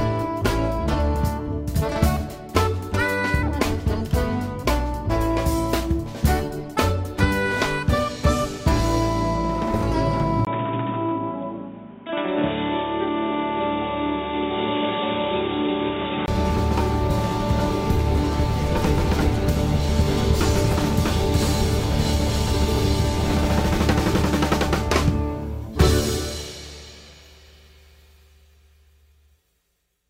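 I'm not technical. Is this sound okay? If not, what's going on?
No. From 10.45 to 16.28 seconds the sound turns dull, boxy and a bit quieter, with a brief dropout at the switch and new background noise. It's likely an input switched to a poorer device, since the tone, level and noise all change together, then recover.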